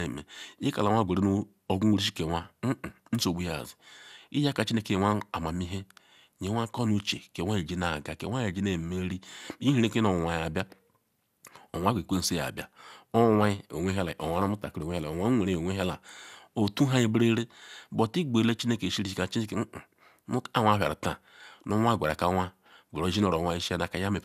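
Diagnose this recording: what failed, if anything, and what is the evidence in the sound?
The codec stage failed, through the whole speech clip, with generation loss. The sound is swirly, smeared and hollow, and consonant attacks blur. Nothing is heard above 16 kHz, which fits MP2 at 128 kbit/s. The likely cause is about ten encode passes, each adding fresh quantisation noise.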